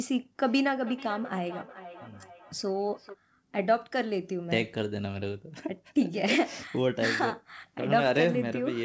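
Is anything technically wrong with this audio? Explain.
Yes. From 0.44 to 3.18 s there is feedback echo between two devices. A second device in the room replays the call, and the first microphone picks it up again, outside its echo canceller's reach. Distinct repeats arrive roughly every 0.4 s, up to about 16 dB below the speech, each thinner and more ringing. Room reverberation would give a smooth, continuous tail instead.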